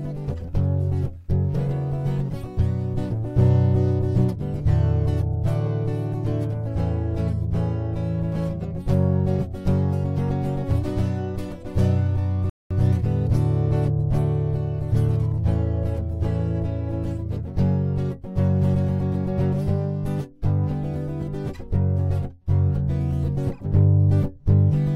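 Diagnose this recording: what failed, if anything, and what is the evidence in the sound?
Playback stall, playback stage: sound stops dead from 12.50 to 12.71 s (210 ms), a flat waveform gap and blank spectrogram column, likely from a starved or blocked player.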